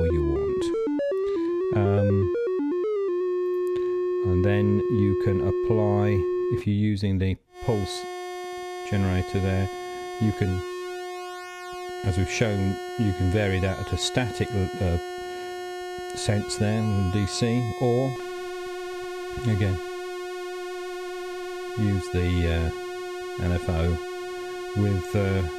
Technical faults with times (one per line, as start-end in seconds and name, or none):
10.04-10.63 CD scratch ticks